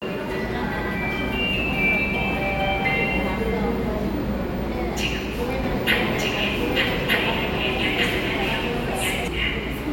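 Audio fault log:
5.64–9.28 s, doubled audio track: a second, full-band copy of the sound runs about a second behind the original at roughly the same loudness, so every event is heard twice. The copy carries no decay or room colouring, and it cuts in and drops out abruptly at the range boundaries rather than fading, which separates it from a natural echo. The likely cause is a second capture through a slower path, or an edit holding two offset copies.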